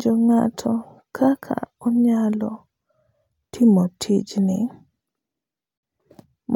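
A gap at a join of encoded pieces opens at 5.78 s and lasts until 5.83 s, a silence of about 52 ms cutting into the speech. Separately encoded segments were joined untrimmed, so encoder start delay and last-frame padding remain. The cut has smeared edges, and the speech resumes exactly where it stopped.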